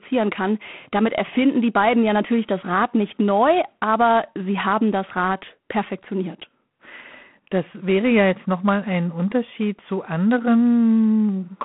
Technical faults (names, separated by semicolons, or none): G.726 ADPCM